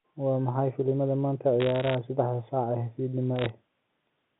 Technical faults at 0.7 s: none

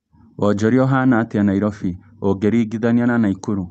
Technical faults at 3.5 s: none

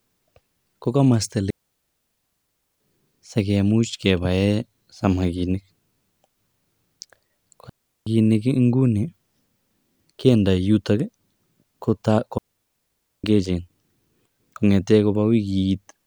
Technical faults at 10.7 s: none

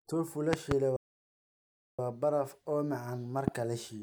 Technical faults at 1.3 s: playback stall

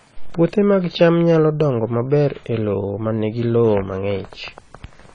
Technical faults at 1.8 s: AAC compression

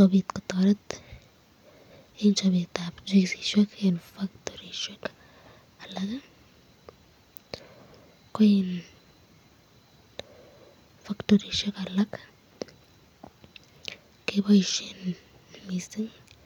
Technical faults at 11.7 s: none

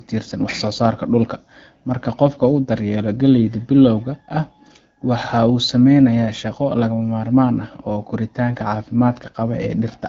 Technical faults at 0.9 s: none

